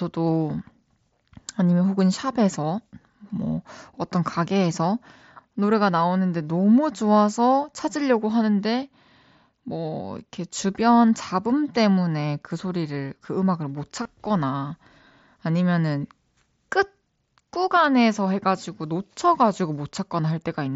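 At 14.03 to 14.05 s the speech is broken by concealed Bluetooth headset packet loss: roughly 22.5 ms of audio between headset and phone went missing, which fits a run of about three lost packets, and the receiver filled the gap by repeating the best-matching recent stretch of waveform. It is heard as a brief buzzy, slightly tonal blip with a small warble as real audio resumes. On a waveform the gap shows as a short run of near-identical repeated cycles at full level. On a spectrogram it shows as evenly spaced harmonic stripes in place of the speech's changing pattern, all within the 8 kHz band of the mSBC link.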